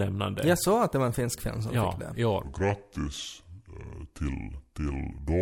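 From 2.43 s to the end, a section at the wrong speed, likely from playback on a mismatched clock, runs at 0.72x, dropping the speech about five semitones, deeper and slower.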